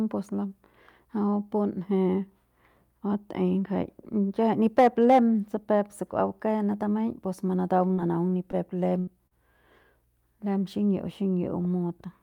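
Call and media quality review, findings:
Hard clipping, 4.79–5.19 s, just before "peuk se". Peaks flattened, crackle on peaks. Input or gain stage overdriven by about 5 dB.

Repeated packet loss (robotic sound), 7.87–9.34 s. Choppy. Network jitter buffer: short gaps up to 77 ms patched by repeating prior sound, about 16% concealed.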